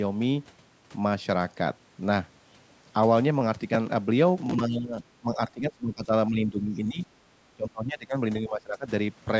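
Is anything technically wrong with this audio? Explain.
Yes. Speech suppressed in double talk at 4.56–6.12, 6.3–7.07, 7.56–8.16 and 8.42–8.89 s: the speech dips by roughly 10 to 20 dB, likely an echo canceller turning down the talker while both sides spoke at once.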